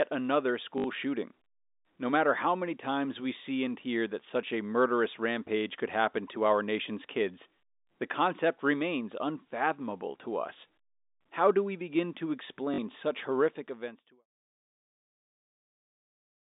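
Packet loss with last packet repeated occurs at 0.78 to 0.84 s and at 12.74 to 12.78 s, between "do we begin to" and "such horrific events to". Missing audio was filled by replaying the previous packet, fitting 20 ms packets, producing brief robotic stutters.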